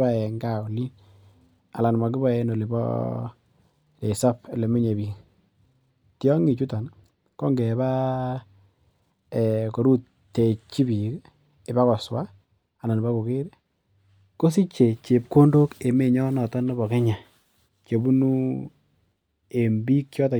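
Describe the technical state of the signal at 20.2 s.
At 20.2 s the signal is intact, with no audible fault at that moment.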